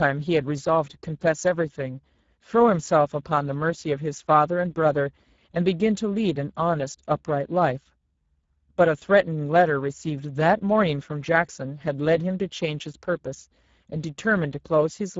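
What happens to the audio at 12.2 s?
At 12.2 s the speech sounds hoarse and grainy, with a noise-like haze over the upper band and nothing above 7.7 kHz. This is Speex codec damage, present throughout: the CELP coder starves its excitation of bits, consistent with a low rate near 10 kbps.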